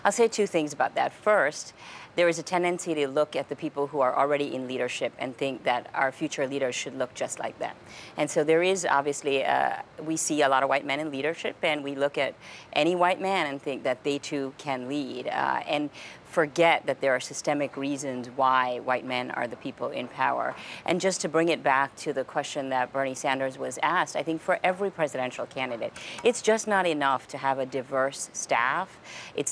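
No technical faults can be heard anywhere in this clip.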